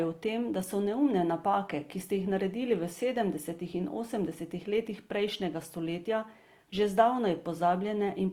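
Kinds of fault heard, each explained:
Opus compression: Throughout, the speech sounds grainy and rough, with tones turned noisy rather than swirling. This is likely Opus music-mode coding at a low rate near 24 kbps filling starved bands with noise. Unlike MP3, there are few watery holes, and the sound extends to about 20.2 kHz.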